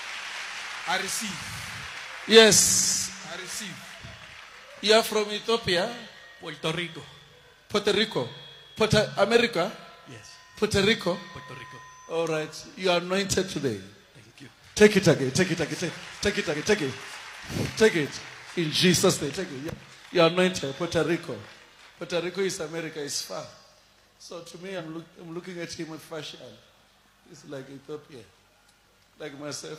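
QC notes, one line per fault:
6.04–6.09 s, 16.49–16.55 s, 24.76–24.82 s: damaged data in a compressed stream. Corrupted frames make the decoder lose sync and hunt for the next header, leaving brief glitches of garbled sound.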